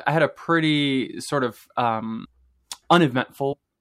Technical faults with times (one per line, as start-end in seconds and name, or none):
2.24 compressed frames skipped
3.52-3.54 compressed frames skipped